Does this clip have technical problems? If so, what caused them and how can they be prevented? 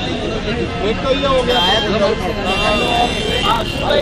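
Yes. From 2.86 s to the end, a steady buzz at about 38.3 Hz sits on the sound, and the audio drags to roughly 0.89 of its normal speed while keeping about its normal pitch. This is a block size mismatch (padded). One stage hands over shorter blocks than the next stage reads, which fits 1024-sample blocks being read into slightly larger ones. Each block's shortfall is filled with silence, so a brief gap recurs at the block rate, producing the buzz and stretching the timing. To prevent it, make every stage in the chain agree on one block size, or buffer properly between stages instead of zero-padding short blocks.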